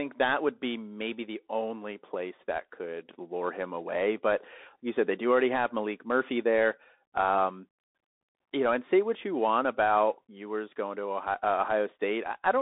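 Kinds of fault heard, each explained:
Bluetooth CVSD headset codec: The speech sounds boxed-in and phone-like, with nothing above about 3.8 kHz and little below 250 Hz. A granular hiss sits under the speech, s sounds come out scratchy, and louder bright passages break into plainly audible roughness. This is the narrowband Bluetooth headset codec, which fits a 64 kbps stream: each sample is a single up-or-down bit with an adapting step size, so fast high-frequency movement outruns the step and distorts.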